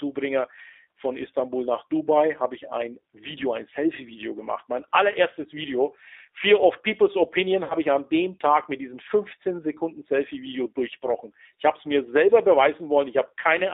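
G.729 codec damage runs throughout: the speech is rebuilt from a filter, pitch predictor and sparse pulses, leaving it rough and synthetic, confined to roughly 300 Hz to 3.7 kHz, consistent with 8 kbit/s G.729A. VoIP packet loss concealed by the speech codec follows at 7.64 to 7.75 s: about 60 ms of audio, likely three packets, is replaced by extrapolated, fading sound before the voice recovers, weak or distorted, into "ich an dem".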